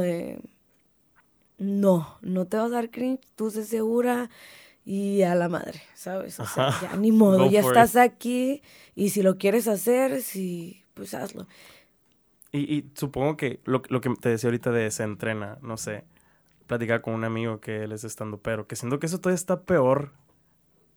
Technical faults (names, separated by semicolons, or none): none